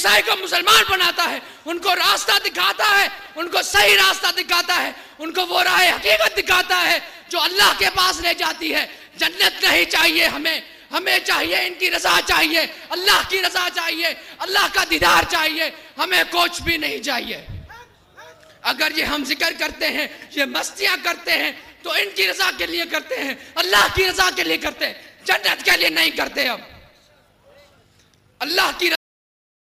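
At 28.95 s the sound just stops mid-flow. That's a cut-off end: the final buffers never got written out, so there's no natural decay, only an abrupt drop straight to digital silence that sits there for the last 0.7 s or so.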